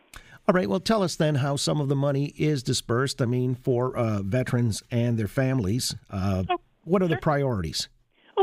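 Nothing stood out as a technical fault on listening to this speech recording.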